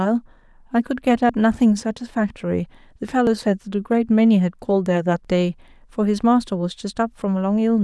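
At 1.29, 3.27, 5.25 and 7.22 s the speech skips forward by roughly 20 ms, the pattern of audio missing between chunks, likely lost as a 2-second chunk closes and the next opens. Unlike a dropout, there's no silent gap, only an abrupt join.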